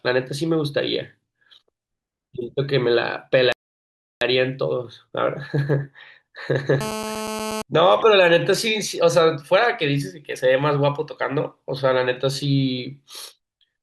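At 3.52 s the speech halts in a rebuffering stall: playback ran dry and waited for more data, adding about 0.69 s of silence before resuming exactly where it stopped at 4.21 s. The waveform shows a flat gap, and the spectrogram shows a blank column with no missing material.

From 6.81 to 7.62 s a GSM phone buzz appears, a hard, raspy tone at 217 Hz with dense harmonics, about 7 dB below the speech. A nearby handset on a call pulsed its transmitter, and the audio circuitry rectified those bursts. The spectrogram shows evenly spaced horizontal lines.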